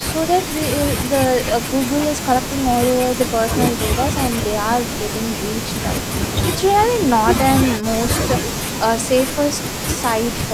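No technical faults can be heard anywhere in the speech recording, and the signal stays continuous and stable throughout.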